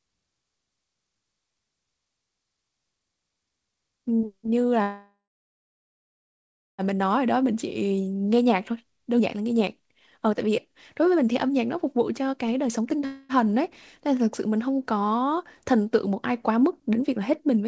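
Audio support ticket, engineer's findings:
Call audio freeze, 4.82–6.81 s: sound stalls for about 2 s. The last sound is held as a fading buzz, then about 1.6 s of silence, then resumes where it stopped. Nothing lost, but delay grows by about 2 s. Likely cause: held-up packets draining the jitter buffer.

Call audio freeze, 13.05–13.32 s: shorter stall of 0.24 s. Brief fading buzz, no silence, resumes intact. Likely the same mechanism, adding another 0.24 s of lag.

Jitter buffer speed-up, 6.94–9.61 s: playback at 109% speed, pitch unchanged, sounds hurried. The receiver trims short pitch-period slices repeatedly, roughly a third of a second in total, to work off the backlog left by the first freeze.

Jitter buffer speed-up, 10.26–10.52 s at 116% and 11.02–13.02 s at 118%: same time compression. The first trims only a few tens of milliseconds, the second roughly 0.4 s. Rushed delivery with stable pitch.

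Jitter buffer speed-up, 16.97 s to the end at 121%: roughly 0.15 s trimmed. The fastest stretch, noticeably clipped pacing on the close. Band stops at 8 kHz, consistent with G.722 at 64 kbps on the call path.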